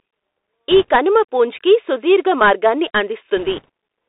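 Throughout, the speech passes through a Bluetooth CVSD headset codec, whose one-bit delta coding, consistent with a 64 kbps stream, confines it to 300 Hz–3.7 kHz, leaving scratchy sibilants and granular hiss. From 0.71 to 0.91 s, just before "కనుమ పూంచ్కి", and again from 3.37 to 3.69 s, bit errors on the Bluetooth voice link, at around one and then two percent, add a rushing crackle without sharp clicks.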